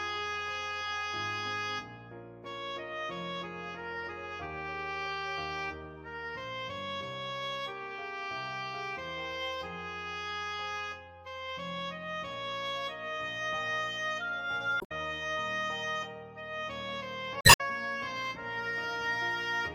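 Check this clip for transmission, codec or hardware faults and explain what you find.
Two faults, both damaged data in a compressed stream, at 14.77 to 14.92 s and 17.38 to 17.61 s. Corrupted frames make the decoder lose sync, producing a brief chirp, squawk, click or short hole.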